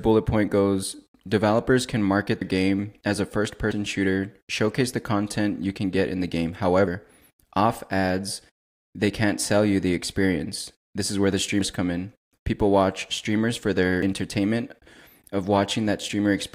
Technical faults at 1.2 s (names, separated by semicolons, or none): none